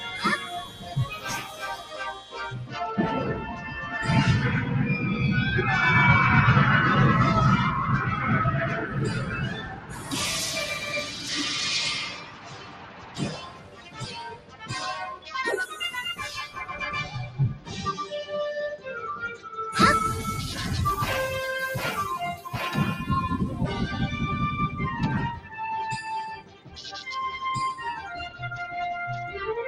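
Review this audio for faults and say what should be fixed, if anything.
A noise suppressor built for speech has been left running on this sound, and it's treating the sustained, steady parts as noise. Across the whole clip the gain keeps swinging, with around 15 dB of loss coming and going, so held material and decaying tails sink while sharper onsets punch through. The result is a pumping, fluttery character where the level never settles. Switch off speech-style noise suppression for music or general sound, or use a gentler broadband denoiser tuned for that material.

Eight stretches show sound cut by the noise suppressor, where it clamps down harder than elsewhere: 0.0–2.75 s (about 13 dB), 3.55–3.71 s (about 4 dB), 8.75–11.31 s (about 14 dB), 12.05–14.71 s (about 14 dB), 15.16–15.34 s (about 13 dB), 17.28–17.71 s (about 9 dB), 25.34–25.56 s (about 12 dB) and 26.36–26.82 s (about 13 dB). 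The long ones near the start and middle lose a couple of seconds of sustained sound each, and the short ones dip for a fraction of a second. Feed the source through without the speech suppressor so steady and fading sounds aren't mistaken for noise.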